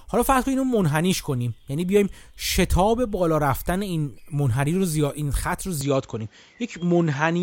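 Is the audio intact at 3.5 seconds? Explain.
Yes, the speech at 3.5 seconds is intact, with no audible fault at that moment.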